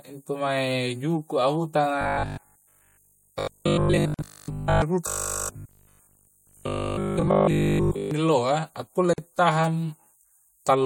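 Speech, with two stretches of robotic sound from repeated short buffers, 2.01 to 4.82 s and 5.07 to 8.11 s. The voice becomes a rigid, metallic 50 Hz buzz that loosely tracks the speech. This fits a 20 ms buffer being replayed while new audio is likely arriving too slowly, with repetition covering most of the first stretch and all of the second. There is also a gap at a join of encoded pieces at 4.14 s and at 9.13 s, each a silence of about 46 ms with smeared edges, after which the sound resumes where it broke off. This points to separately encoded segments joined with their encoder delay and end padding left in place.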